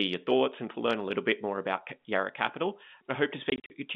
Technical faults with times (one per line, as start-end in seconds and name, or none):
3.50-3.70 packet loss filled with silence